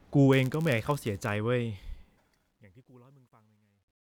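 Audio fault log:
0.32–1.36 s, block size mismatch (padded): a buzz at 99.6 Hz under the speech, which runs slightly slow (0.996×) because zero-filled gaps pad each short block.
1.61–4.01 s, truncation distortion on a fade: the fade-out turns gritty, worst from 2.76 s, which fits an undithered level stage keeping only 11 bits.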